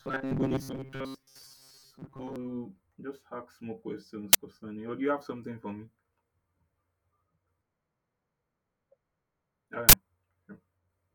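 Robotic sound from repeated short buffers runs from 0.01 to 2.36 s. The speech becomes a rigid, metallic buzz pitched at 134 Hz that only loosely tracks the words. The likely cause is audio arriving too slowly, so the playback side repeats a fragment of about 7.5 ms over and over while most of the real signal, roughly seven tenths of it, is skipped. The repetition rate imposes that fixed pitch.

An uninitialised buffer appears from 4.33 to 4.35 s, between "just ask more questions" and "concerning or do you". It is a sudden, loud burst of digital noise lasting about 21 ms, which fits a 1024-sample block played before any audio was written to it, so stale memory came out as sound. The same fault returns from 9.89 to 9.93 s as a longer burst of about 43 ms, consistent with a 2048-sample block.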